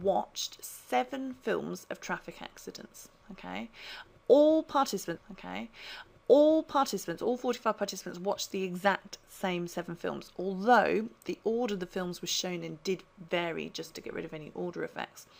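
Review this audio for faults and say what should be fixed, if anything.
There's a stream segment repeated at 5.16 s: the player queued the same chunk twice, so the two seconds up to 7.16 s play over again, with a small blip right where it jumps back. Deduplicating segments by sequence number before they're buffered would keep this from happening.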